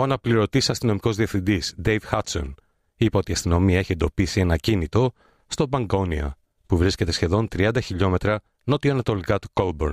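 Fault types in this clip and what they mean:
Nothing to list here, since this bit of speech comes through without any technical faults.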